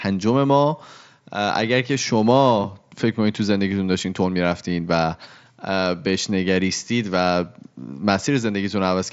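Speech with no technical fault anywhere in the clip. It has passed through a Bluetooth mSBC headset codec, so nothing is heard above about 7.7 kHz, and only light codec graininess remains.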